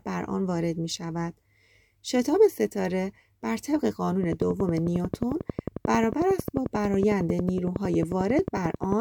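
From 4.24 s to 8.93 s, a steady ticking runs over the speech and through its pauses: a train of clicks, each with much the same shape, arriving at a regular 11.1 per second, around fifty in all. The clicks stand out sharply, peaking roughly 10 dB above the speech itself. Such a regular, identical pulse points to something outside the recording injecting it, likely electrical interference from nearby equipment or a faulty connection or power supply.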